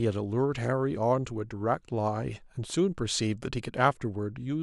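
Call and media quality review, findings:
No audible faults found in this speech recording; no component requires follow-up.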